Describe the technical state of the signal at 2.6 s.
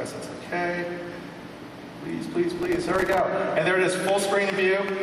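At 2.6 s the signal is inside a burst of processor overload crackle running from 2.50 to 3.20 s. The processor keeps missing its deadlines for very short buffers, around a millisecond or two each, and every missed buffer drops out as silence with hard edges. Dozens of these tiny gaps in a row produce a gritty, tearing crackle over the sound. Unlike a single dropout, this is a dense train of clicks that ends once the load eases.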